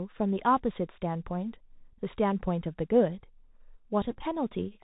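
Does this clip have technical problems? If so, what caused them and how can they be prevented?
Yes. The whole clip is a Bluetooth CVSD headset codec signal. Nothing is heard above 4 kHz, s sounds are scratchy, and a granular hiss sits under the speech throughout. CVSD encodes each sample as a single up-or-down bit, which here fits a 64 kbps link, and loud high-frequency sounds outrun its adapting step size. That grainy, overloaded texture is what separates it from plain low-pass filtering, which would sound muffled but clean. Using a wideband (mSBC or LC3) headset profile, or a wired microphone, prevents it.

A Bluetooth headset packet repeat breaks up the audio from 4.11 to 4.23 s. About 52.5 ms of sound is replaced across that 112.5 ms stretch, which fits roughly fourteen lost 3.75 ms packets, with the longest run about 10 ms. The chip replays the previous packet's bits rather than leaving a gap, so the result is brief buzzy ticks instead of the silence of a dropout. 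Keeping the headset close to the phone and away from 2.4 GHz interference prevents it.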